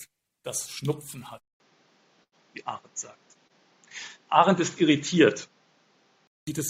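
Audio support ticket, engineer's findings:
Dull, boxy sound from 1.4 to 6.47 s after a 200 ms gap. Spectrogram goes empty above 7.3 kHz, with a new noise floor about 40 dB below the signal and a level shift of a few dB. Input switched to a poorer device is likely.

Short stall from a late packet at 2.23–2.35 s (88 ms) and 3.47–3.53 s (25 ms). Jitter buffer ran dry, so the last sound was held, with no content lost. These show as smeared, repeated waveform stretches.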